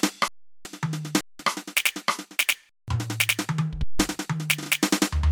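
Underrun with held sample at 0.28, 1.21, 2.69 and 3.84 s, lasting 0.37, 0.19, 0.19 and 0.16 s. The output buffer ran empty and the converter froze on its last value, so the music stops dead on a flat hold, then returns past the audio that was skipped.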